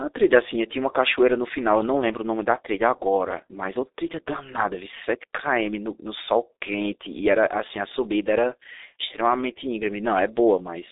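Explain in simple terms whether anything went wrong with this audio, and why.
Something did go wrong, and it lasts the whole recording. The speech has passed through the G.723.1 codec, an early internet-phone format. It squeezes sound into tiny packages and throws a lot away. Nothing above about 3.8 kHz survives, and the line keeps only roughly 300 Hz to 3.7 kHz. That makes the voice muffled and thin. The damage is heavy here. Consonants smear together and the voice sounds hoarse from start to finish.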